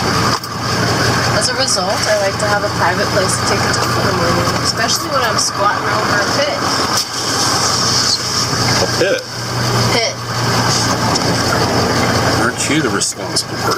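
Gain pumping runs through the whole clip, with the gain swinging around 15 dB. The likely cause is excessive input gain driving a fast limiter. Unlike a noise gate, the gaps get louder rather than silent.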